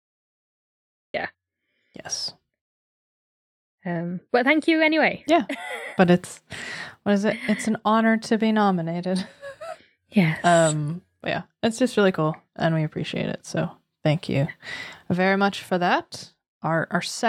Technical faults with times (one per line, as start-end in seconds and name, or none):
0.00-1.14 cut-off start